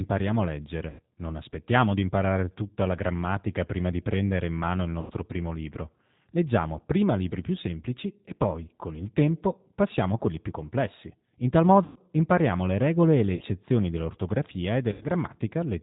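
Throughout, the speech carries plainly audible G.729 codec damage. The 8 kbit/s coder rebuilds each 10 ms frame from a filter, a pitch predictor and a few pulses. Nothing above 4 kHz survives. The voice sounds muffled, rough and slightly synthetic.

VoIP packet loss concealed by the speech codec strikes five times. The gaps are at 0.90 to 1.01 s, at 5.01 to 5.12 s after "prendere in mano il" and before "primo libro", at 11.84 to 12.00 s, at 13.35 to 13.43 s before "dell'ortografia e", and at 14.92 to 15.06 s after "dell'ortografia e". About 60 to 120 ms of audio goes missing each time. The decoder stretches its last pitch and filter into a fading buzzy tone or coloured noise. The voice then sounds weak as it recovers.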